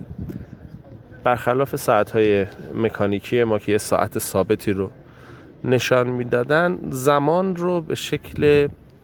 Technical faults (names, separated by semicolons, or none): none